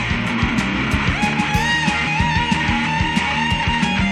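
No technical fault can be heard anywhere in the audio, and the signal stays steady and intact throughout.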